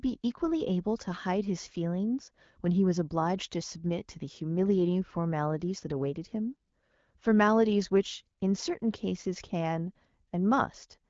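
No technical faults can be heard anywhere in this speech recording. It has passed through the AMR wideband (HD Voice) codec at 12.65 kbit/s, which leaves only light coding marks and no content above about 7.4 kHz.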